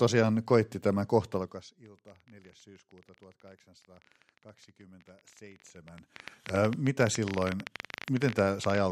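Right after "koitti tämä", from 1.34 to 1.75 s, you get zipper noise. The level drops by roughly 25 dB in unsmoothed 1 dB steps, about fifty a second, and each jump leaves a tiny click, so the fade sounds like a quick zip.

From 1.86 s through 8.79 s there's a train of clicks, around 15.3 per second at an uneven pace, about a hundred in all. They poke out roughly 15 dB above the speech and tick through the pauses too. It's likely interference or a faulty connection.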